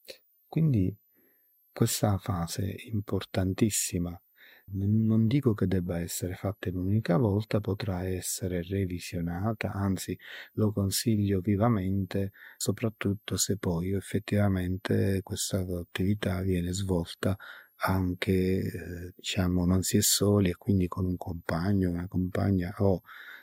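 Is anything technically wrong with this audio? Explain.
Yes. Throughout the speech there is a switching supply whistle: a switch-mode power supply running in an audible burst mode or beating with another supply injects a high tone drifting between 11.4 and 15 kHz, mostly near 15 kHz, sitting roughly 40 dB below the speech.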